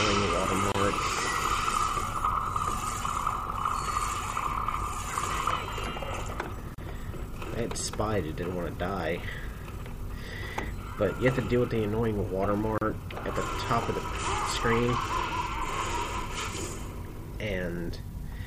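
Three short silences cut into the audio at 0.72, 6.75 and 12.78 s, every 6 s, lasting 27, 34 and 34 ms. That's a gap at a join of encoded pieces: chunks encoded separately and butted together untrimmed, so each run's start delay and end padding survive.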